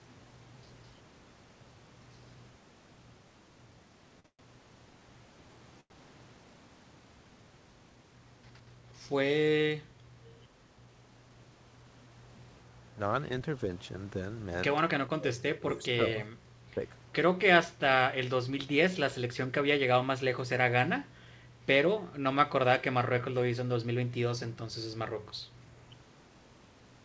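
At 4.20 s a short stall from a late packet begins. A packet arrived late and the jitter buffer ran dry. The receiver held the last sound for about 45 ms, then resumed in place. The sound stretches briefly, with a faint buzz or dip.

From 4.26 to 4.41 s a call audio freeze follows. Packets were likely held up in transit. The last sound is extended as a fading buzz or hiss, 124 ms in all, the last 80 ms of it silence. Then the audio picks up where it stopped.

A second short stall from a late packet runs from 5.80 to 5.92 s. Here the held sound lasts 96 ms. Nothing is lost, but the sound drags before moving on.

From 10.24 to 10.40 s there is an echo leak. A faint, delayed copy of the speech returns about 362 ms late, well below the main level. It is likely a loudspeaker on one side whose echo canceller let some signal through.

Speech suppressed in double talk appears from 15.08 to 16.17 s. 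The speech dips by roughly 25 dB at worst, over about a second. Both sides were likely talking at once, and the canceller turned everything down. Smaller dips of around 10 dB occur from 16.39 to 16.58 s and from 23.82 to 24.11 s.

From 19.46 to 20.23 s there is a jitter buffer speed-up. The buffer held too much audio. Tiny pitch-period slices, roughly 70 ms in total, were cut out. The speech runs at 107% speed with unchanged pitch and sounds hurried.

Throughout, the G.722 call path leaves nothing above 8 kHz.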